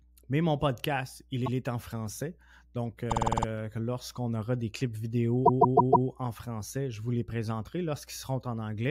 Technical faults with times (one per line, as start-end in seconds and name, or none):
1.45-1.56 repeated frames
3.10-3.46 repeated frames
5.45-6.07 repeated frames